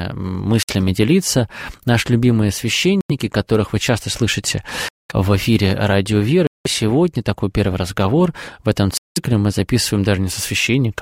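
The sound drops to brief dead silence five times, at 0.63, 3.01, 4.89, 6.47 and 8.98 s, with gaps of 58, 88, 214, 184 and 187 ms, then resumes. These are likely Bluetooth stalls, where delayed packets let the headphones' buffer empty until retransmissions arrived.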